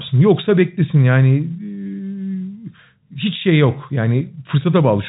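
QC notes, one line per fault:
Nothing stood out on listening to this speech clip, which carries the narrow, telephone-band sound of G.711 coding.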